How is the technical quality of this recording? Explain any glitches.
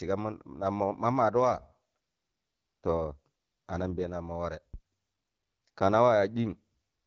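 The recording has two kinds of glitch.

AMR rate drop, from 1.43 to 4.22 s and again from 6.46 to 6.57 s: a weakening radio link forced the wideband codec to a lower rate, and the speech turns rougher and more synthetic with no gap, consistent with a fall from 12.65 to 8.85 kbit/s.

Phantom power thump, from 4.74 to 4.83 s: a supply switching on the live input sent a voltage step through the coupling capacitors, giving a deep thump that dies away in about 21 ms.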